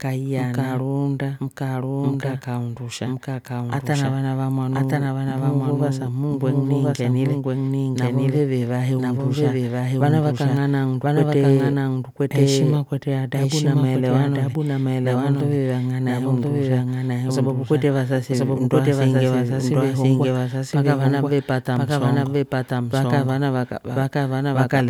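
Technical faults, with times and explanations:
Throughout, doubled audio track: the speech was most likely captured a second time through a slower path and mixed back in, so a full-band copy runs about a second behind the original at roughly the same level. Because the second copy is a clean duplicate rather than a reflection, it carries no decay or room colouring, and every phrase is heard twice.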